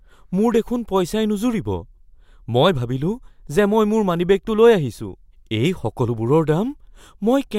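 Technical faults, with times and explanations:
No technical faults can be heard in this speech clip.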